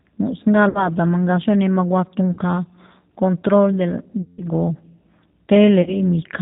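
Throughout, the speech sounds narrow, slightly rough and synthetic, with nothing above 4 kHz. This is the G.729 codec at 8 kbit/s, which rebuilds each short frame from a vocal tract filter, a pitch predictor and a few pulses.

At 0.69 to 0.94 s, 2.33 to 2.39 s, 4.22 to 4.46 s and 5.82 to 5.99 s, the sound smears into a fading buzzy tone or coloured noise, then returns weak. This is VoIP packet loss concealed by the speech codec. About 60, 40, 160 and 40 ms of audio were lost, and the decoder extrapolated its last frame with falling gain.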